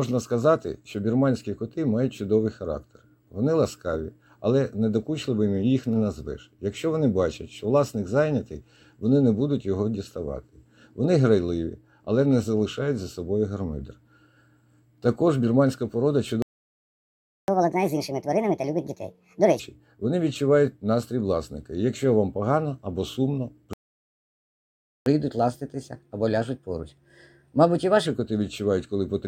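Playback stalls cut the audio to silence from 16.42 to 17.48 s, about 1.06 s, and again from 23.73 to 25.06 s, about 1.33 s. Each time the sound breaks off mid-flow and resumes only after the gap, most likely because the player's buffer ran dry or its output thread was blocked and nothing was fed to the device until it recovered. Catch-up at higher speed follows each stall as the player races through its backlog by resampling. From 17.48 to 19.60 s the audio runs at 1.5 times normal speed, with pitch raised by roughly seven semitones. From 25.06 to 28.06 s it runs at 1.15 times, about two semitones sharp. Each time it then settles back to normal speed and pitch.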